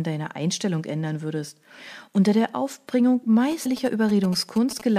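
From 3.52 s to 4.82 s there's GSM signalling interference: a nearby 2G phone's bursts get rectified into galloping ticks and 217 Hz buzzing, sitting roughly 15 dB under the speech. At 3.65 s some compressed frames are skipped, so the audio jumps ahead around 150 ms, which fits 26 ms frames. The overlapping frames turn the join into a quick smeared blip.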